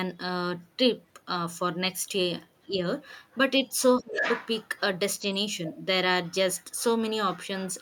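From 2.64 to 2.79 s, speech suppressed in double talk. The voice dips by about 15 dB, likely because the echo canceller cannot separate both talkers. At 3.99 to 4.22 s it drops deeper, about 25 dB. From 3.99 to 4.47 s, the other side's voice leaks through at roughly equal level, likely echo the canceller left in.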